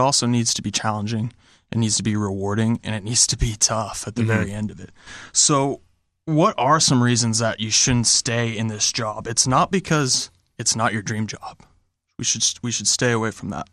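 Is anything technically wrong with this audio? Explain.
Yes. The speech carries plainly audible MP2 compression throughout, likely from a bit-starved Layer II encode at about 80 kbps. Upper sub-bands flicker out, leaving it dull and gurgly.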